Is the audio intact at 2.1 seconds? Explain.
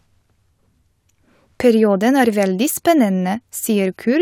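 Yes, the audio is intact at 2.1 seconds, with no fault at that moment.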